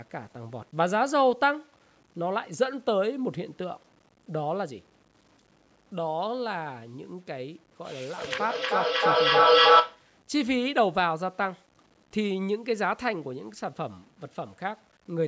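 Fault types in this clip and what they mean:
Low bit depth without dither: grainy, gritty distortion runs under the speech throughout and changes with it, roughly 35 dB below the signal, worst on quiet passages; likely the audio was truncated to about 8 bits with no dither, so the rounding error tracks the signal.
Feedback echo between two devices: from 8.17 to 10.09 s the speech comes back repeatedly at roughly 300 ms intervals, thinning and ringing, and the repeats build up to about 9 dB above the speech instead of fading, because a second device's speaker feeds the other microphone in a loop.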